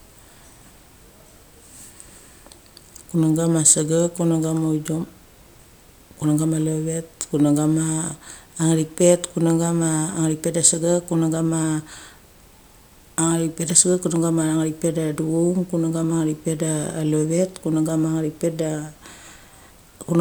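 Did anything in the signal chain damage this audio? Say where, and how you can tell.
No, the chain left it undamaged.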